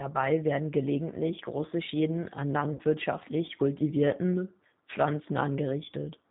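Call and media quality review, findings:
G.729 codec, whole clip: speech band-limited at 4 kHz, rough and synthetic at 8 kbit/s. The rough, synthetic texture sets it apart from a plain low-pass filter.

VoIP packet loss concealed by the speech codec, 2.73 to 2.82 s: about 60 ms of sound lost, consistent with three 20 ms packets. The decoder stretches the last pitch and filter into a fading tone or coloured noise, not a silent dropout, and speech stays weak or distorted briefly after.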